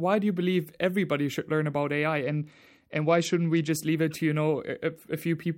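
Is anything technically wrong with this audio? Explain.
Yes. A Bluetooth SBC bit pool drop runs from 2.23 to 3.71 s, ending just before "leave it to you". When the wireless link struggles, the phone cuts the encoder's bit budget to keep audio flowing. The highest sub-bands are starved of bits and the rest are quantised coarsely. The speech loses its treble and picks up a gritty, grainy noise until quality recovers. The degradation fits a bit pool falling from 31 to 11, near 83 kbps.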